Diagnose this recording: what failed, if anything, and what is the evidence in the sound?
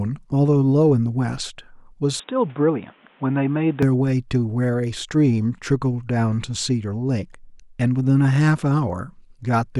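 From 2.2 s to 3.83 s the speech narrows abruptly, with nothing above 3.8 kHz, drops by about 5 dB and picks up a new noise floor roughly 30 dB down, with no gap at either edge. This is likely an input switched to a poorer device at the capture stage.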